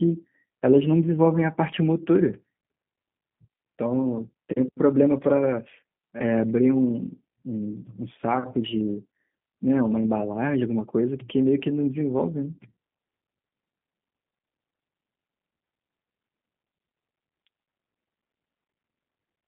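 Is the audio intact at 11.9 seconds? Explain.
No. At 11.9 s the signal is still passing through the G.729 codec, as it is for the whole clip. The speech is rebuilt from a vocal tract filter, a pitch estimate and a handful of pulses per 10 ms frame, which fits an 8 kbit/s VoIP link, within a 150 Hz to 3.5 kHz telephone band. Nothing above 3.6 kHz survives, so the speech sounds muffled and plainly rough and synthetic.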